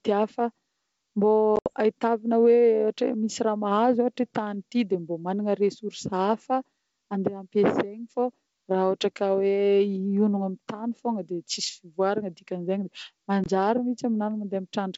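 Packet loss on an ADPCM call opens hard-edged gaps at 1.56 to 1.71 s (about 80 ms lost, longest run 70 ms) and 13.44 to 13.47 s (20 ms). The decoder's predictor and step size lose track, so the speech resumes slightly distorted under the wideband G.722 coding.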